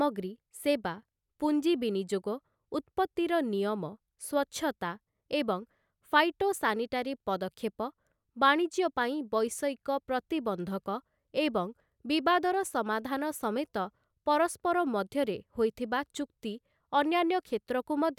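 No technical faults are audible.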